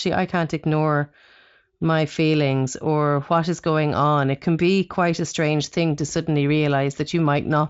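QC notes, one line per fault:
No faults are heard in this speech clip. It sounds like Speex at a high quality setting, with no audible codec damage and no content above about 7.6 kHz.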